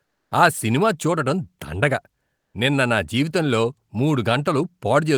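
The sender's discontinuous transmission likely stopped sending audio during pauses, as with Opus DTX, so the receiver substituted comfort noise in place of the background from 0.04 to 0.31 s and from 2.38 to 2.54 s. In each gap the real background, already faint at about 53 dB below the loudest speech, gives way to a steady, featureless hiss, about 3 dB quieter in the first gap and about 6 dB quieter in the second.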